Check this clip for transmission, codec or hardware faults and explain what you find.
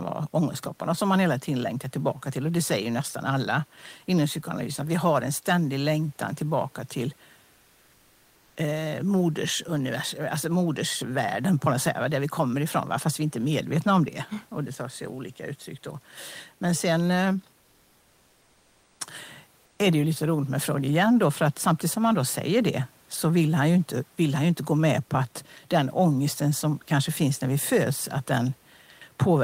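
Two pauses show comfort noise in place of the background. From 17.59 to 18.99 s, just after "sen eh", and again from 19.65 to 19.79 s, just before "är det ju lite", the room noise (about 37 dB below the speech) gives way to a smooth, featureless hiss about 1 to 2 dB quieter. The likely cause is Opus discontinuous transmission: the sender stops sending during silence and the receiver synthesises matching noise. Unlike a dropout or noise gate, the pause never falls silent.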